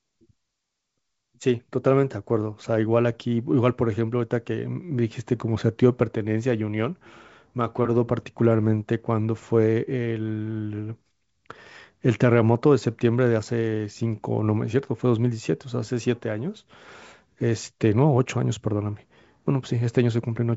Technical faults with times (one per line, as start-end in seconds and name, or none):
none